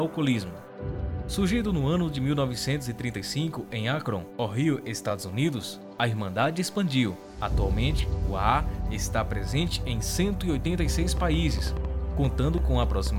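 From 11.17 to 13.08 s, a train of clicks: roughly ten uneven pops about 5 dB over the sound, likely interference, showing thin vertical spikes.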